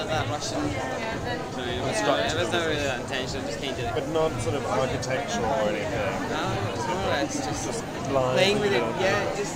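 A USB whine runs through the entire recording, a fixed-pitch tone built on 1 kHz with its strongest component at 9 kHz, roughly 35 dB below the audio. A spectrogram would show steady horizontal lines at 1 kHz multiples, brightest at 9 kHz. Current drawn in the USB bus's 1 ms frames is leaking into the audio through power or ground.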